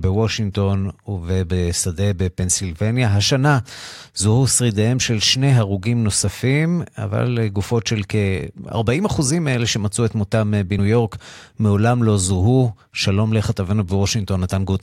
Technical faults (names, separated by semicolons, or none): compressed frames skipped